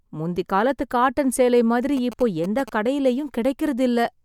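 From 1.97 to 2.70 s, GSM signalling bursts intrude. A nearby phone's radio pulses get rectified, producing galloping ticks and 217 Hz buzzes about 15 dB below the speech.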